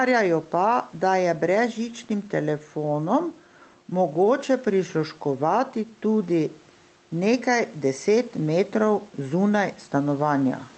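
Gain pumping runs through the whole speech clip. The gain swing is around 5 dB. The likely cause is a microphone gain set far too high, with a fast limiter pulling it back on every peak. Loud and soft passages sit closer together than they should. The speech sounds squashed.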